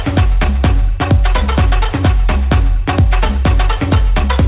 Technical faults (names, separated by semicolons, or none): none